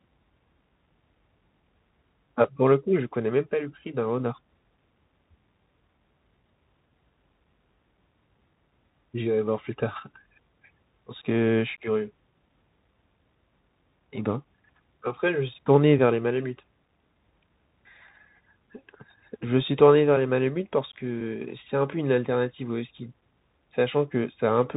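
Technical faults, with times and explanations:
Throughout, Bluetooth CVSD headset codec: the speech was coded one bit per sample as up-or-down steps of adapting size, which fits a 64 kbps CVSD link. Nothing above 3.8 kHz survives, fast loud changes outrun the step and distort, s sounds turn scratchy, and granular hiss sits underneath.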